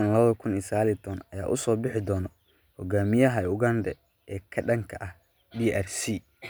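A short speech recording with no technical fault to be heard. Nothing in it calls for a time or a cause.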